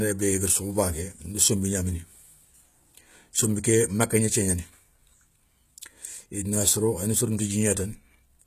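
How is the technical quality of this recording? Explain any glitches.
The speech has audible compression damage all the way through, most likely from HE-AAC compression at a low bitrate, roughly 20 kbps going by the sound. The codec carries only the lower spectrum and fakes the treble by copying lower bands upward. So the s sounds come out gritty and metallic, and nothing reaches above 14.9 kHz.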